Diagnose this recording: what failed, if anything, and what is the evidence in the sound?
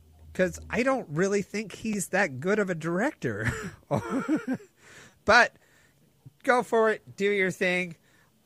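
Repeated buffer at 1.93 s and from 5.10 to 5.12 s, in the driver or buffer stage. Each is a click or brief buzz: one roughly 5.3 ms block, which fits a 256-sample buffer, replays with hard joins, twice then four times, because fresh audio arrived late.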